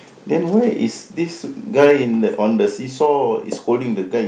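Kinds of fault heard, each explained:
Microphone overload: From 1.8 to 1.91 s the loudest part of the speech turns harsh and crackly, with the tops of the peaks flattened on a small share of samples. The input gain was likely high enough to push peaks about 4 dB past the converter's ceiling.
Microphone volume stepped down: Just after that distorted peak, speech and background drop together by about 3 dB at 2.04 s, then by another 2 dB or so at 3.06 s. This is likely the call software turning the mic input down in steps.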